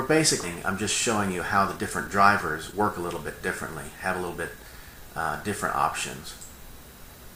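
At 0.43 to 0.45 s the sound jumps abruptly forward with no gap or fill, and about a second of material is simply gone. This is a skip ahead: a stretch of audio was dropped while later audio was already waiting, so playback rejoins much later and the two edges butt together almost directly.

From 1.76 to 2.23 s the sound hurries along at roughly 115% speed without any change in pitch, then runs faster again from 2.69 to 3.40 s and from 3.89 to 5.09 s at about 107%. These are jitter buffer speed-ups: the receiver trimmed short pitch-period pieces to shrink an overfull buffer, removing tens of milliseconds in the first two stretches and around a tenth of a second in the last.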